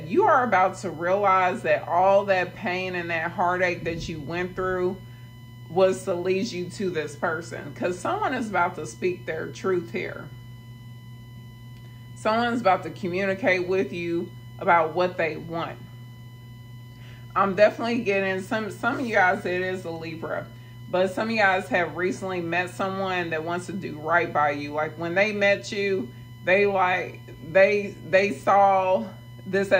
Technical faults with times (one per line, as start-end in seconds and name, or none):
0.00-29.80 USB whine